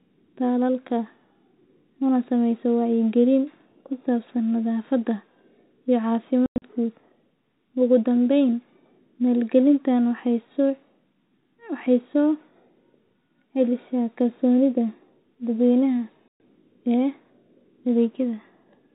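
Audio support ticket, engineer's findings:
Packet loss filled with silence, 6.46 to 6.62 s: speech drops out in several hard-edged gaps over about 160 ms, around 140 ms missing in total, longest hole 100 ms. Gaps fit 20 ms packets, so it's the network path.

Packet loss filled with silence again at 16.28 to 16.40 s: one 120 ms hole, same hard edges. The G.711 phone-band sound around both holes is just the codec doing its normal job.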